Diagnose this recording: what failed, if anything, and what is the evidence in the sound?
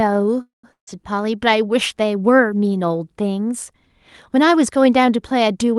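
A call audio freeze runs from 0.41 to 0.65 s, most likely at the network stage: packets stalled and the jitter buffer ran dry. The last sound is stretched into a fading buzz, then about 150 ms of silence, and the speech resumes where it stopped, so nothing is lost but everything after is pushed back by 221 ms. On a spectrogram it shows as a smeared, decaying band, then a blank gap. The waveform shows a tapering tail, then a flat line.

A long network dropout follows at 0.72 to 0.91 s. Again the receiver extends the last sound as a fading hiss, leaving about 120 ms of silence, but here about 160 ms of speech likely never arrives, so it resumes further on with a jump in content. Visually it resembles the freeze, a decaying smear and a flat gap. The giveaway is the abrupt, discontinuous restart. The speech itself carries Opus-style coding at a 12 kHz bandwidth.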